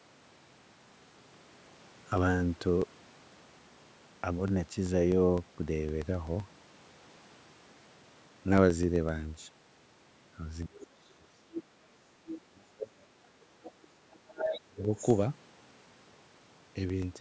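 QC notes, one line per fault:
10.66–11.35 s, 12.42–13.57 s and 14.63–14.88 s: speech suppressed in double talk. The talker's speech sinks by about 25, 40 and 30 dB, likely because an echo canceller confused it with far-end sound. On the waveform the envelope collapses.
11.54–11.63 s, 12.28–12.39 s, 13.63–14.60 s and 14.96–15.01 s: other side's voice leaking through. A second voice sits about 10, 15, 5 and 25 dB below the speech, likely loudspeaker echo left in the microphone signal. The spectrogram shows separate harmonic traces.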